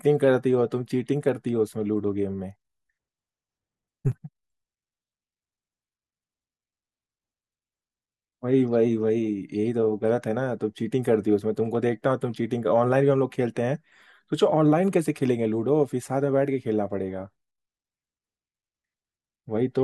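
At 4.12 s a block of digital silence, about 5 ms, fitting a 256-sample buffer left unfilled, cuts the speech, heard as a tick; the waveform flatlines, and the spectrogram shows a thin broadband stripe.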